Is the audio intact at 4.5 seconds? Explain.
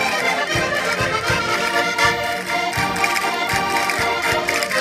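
Yes, the audio is intact at 4.5 seconds, with no dropout, click, distortion or other fault at that moment.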